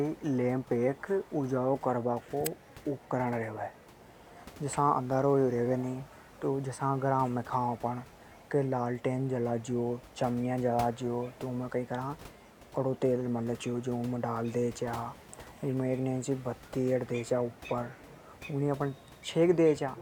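Speech recording with no technical faults to report.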